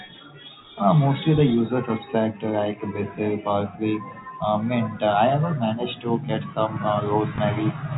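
Packet loss with the last packet repeated occurs at 7.36 s in this speech recording, just after "managed to get some". For about 20 ms the receiver replays the previous stretch of audio, which fits a single lost packet. The single replayed piece makes a small blip. The telephone-band sound of the G.711 coding, with nothing above 4 kHz, runs through the whole clip.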